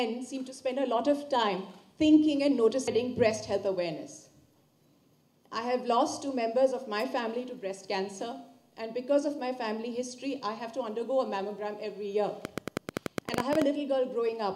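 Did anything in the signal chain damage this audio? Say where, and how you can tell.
Yes: a train of clicks from 12.45 to 13.63 s, about a dozen a second, unevenly spaced and popping well above the audio, likely interference or a faulty connection or power supply.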